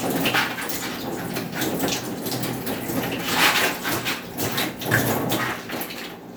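No technical faults can be heard anywhere in this audio.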